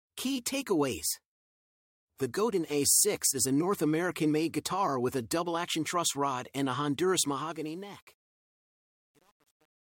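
From 7.26 s to the end at 9.98 s, the closing fade-out turns gritty and grainy, and from 7.69 s onward the grit is at its worst. This is truncation distortion on a fade. The fade or gain stage rounds the signal to very few bits without dither, so the quiet tail collapses into coarse square steps. The graininess fits a stage keeping only 9 bits.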